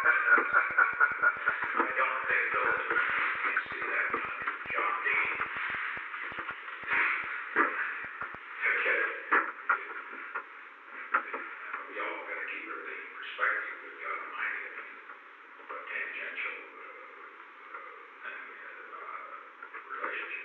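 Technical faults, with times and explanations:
0.04–8.36 s, train of clicks: a repeated pulse, likely interference from nearby equipment or a faulty connection, breaks into the signal about six times per second at uneven spacing, giving around fifty similar pops that stand a few dB above the sound and carry through the pauses.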